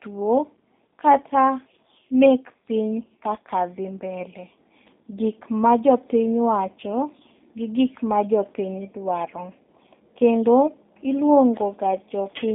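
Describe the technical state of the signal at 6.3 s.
At 6.3 s the speech sounds narrow, slightly rough and synthetic, with nothing audible above about 3.7 kHz. The band sits roughly between 250 Hz and 3.6 kHz. This is G.729 codec damage, present for the whole clip and plainly audible here. The codec models each 10 ms frame as a vocal tract filter, a pitch predictor and a few pulses, which fits a low-rate 8 kbit/s VoIP link.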